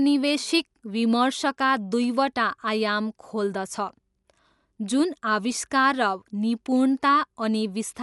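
Right through the speech there's nothing above 11.4 kHz, so it sounds dull, with a rough, fluttering noise hanging around the voiced parts. That's likely Dolby Digital compression at a low bitrate, something like 64 kbps: the encoder narrowed the band, and many lines got no mantissa bits, so the decoder filled them with dither noise.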